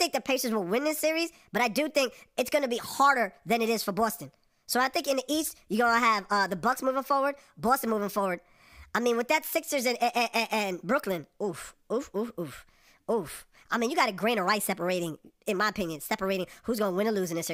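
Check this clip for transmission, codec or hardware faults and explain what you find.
There is one fault, and it runs for the whole clip: a wrong sample rate. The speech plays about 1.38 times too fast and about 5.55 semitones too high, which fits audio recorded at 32 kHz being played back at 44.1 kHz with no rate conversion. Because each sample is simply clocked out sooner, timing and pitch scale together by the same ratio. The voice sounds hurried and raised in pitch, with a thin, chipmunk-like quality.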